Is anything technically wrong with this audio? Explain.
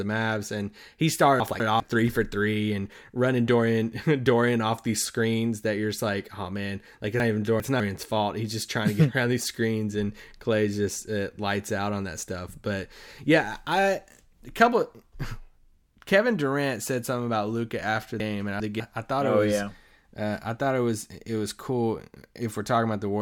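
Yes, there are three spots where chunks play out of order, each built from 200 ms pieces. At 1.4 to 1.8 s, between "and he" and "three for three and", one chunk turns up one slot late. At 7.2 to 7.8 s, after "like oh man like", and at 18.2 to 18.8 s, just before "I thought oh it", a chunk lands two slots late. Nothing's missing, but the shuffle makes each moment sound jumbled.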